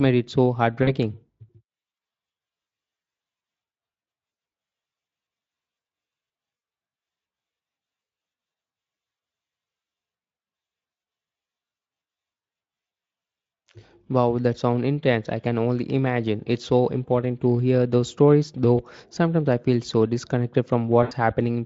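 At 0.83–0.97 s, just after "it so", and again at 2.67–2.71 s, 6.57–6.61 s, 18.77–18.83 s (between "to hear those stories" and "sometimes I feel so") and 21.03–21.13 s (after "I feel so disconnected"), VoIP packet loss concealed by the speech codec covers gaps of 40, 40, 40, 20 and 80 ms. The decoder stretches the last pitch and filter into a fading buzzy tone or coloured noise that stays weak briefly afterward. On a spectrogram, harmonics run flat and dim; the waveform shows repeating cycles with a shrinking envelope, beneath the Speex coding.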